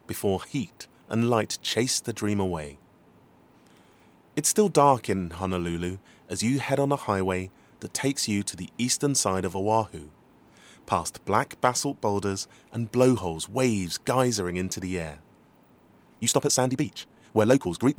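From 16.03 s right to the end there's a time-stretched section: the pace suddenly jumps to about 1.52 times normal while the pitch stays put, so it comes across rushed. Most likely software squeezed that stretch to fit a length by dropping short pieces.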